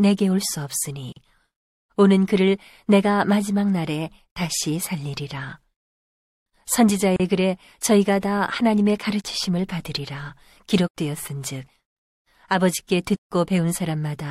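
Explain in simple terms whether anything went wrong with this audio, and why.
At 1.12 seconds the speech briefly drops out for about 40 milliseconds, recurring every 6 seconds. This gap at a join of encoded pieces comes from encoder padding left where pieces were stitched.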